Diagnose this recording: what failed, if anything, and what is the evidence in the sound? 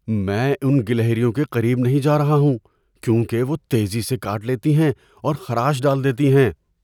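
Nothing in this speech recording points to a failure at any stage of the chain. No fault can be heard in it, so there is no evidence to place in time and no mechanism to explain.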